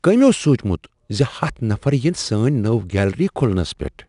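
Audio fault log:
throughout 4-bit ADPCM compression: coarse 4-bit prediction steps, fitting an 89 kbps stream, leave audible gritty hiss tracking the speech level, with nothing above 10.6 kHz.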